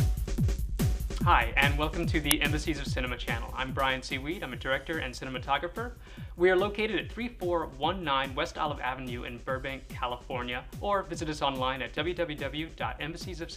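At 2.31 s there is an uninitialised buffer. A block of about 1.45 ms, which fits a 64-sample buffer, was played before any audio was written into it. Leftover memory came out as samples instead. It is heard as a loud, sudden crack.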